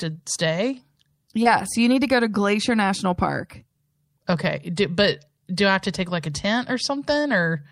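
At 1.43 to 1.47 s there is a short concealed packet loss. About 20 ms of speech failed to reach the decoder in time, and it filled 17 ms by extending the preceding sound before blending back into the received audio. This leaves a brief smear or wobble.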